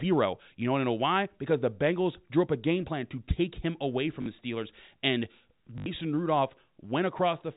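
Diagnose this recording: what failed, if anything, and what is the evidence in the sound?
A short robotic stutter breaks the speech at 4.22 to 4.26 s, right after "take him away from", and a longer buzzing one follows at 5.78 to 5.86 s. This is packet loss with last packet repeated, a network fault. The receiver replayed one stretch of audio to fill 40 ms and then 80 ms of gaps. That fits 20 ms packets repeating at 50 Hz. The G.711 telephone coding carrying it stays below 4 kHz.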